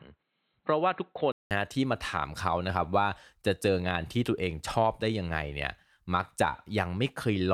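From 0.0 to 1.51 s the speech sounds dull and boxy, with nothing above 4.2 kHz and a faint noise floor. A 188 ms silence then gives way to full-band sound at similar level, likely an input switched from a poorer device.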